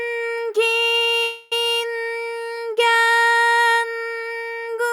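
At 1.22 s the sound stops moving forward and the last moment is drawn out as a buzzy, hiss-like tail that fades without reaching silence, until the audio picks up again at 1.53 s exactly where it left off. This is a call audio freeze: packets were likely held up in transit, leaving the jitter buffer empty, so the receiver filled about 290 ms with concealment. Nothing is lost, but everything afterwards arrives that much later.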